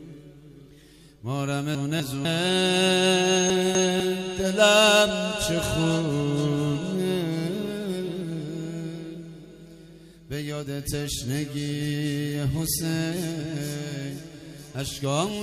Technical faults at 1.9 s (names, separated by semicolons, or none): chunks out of order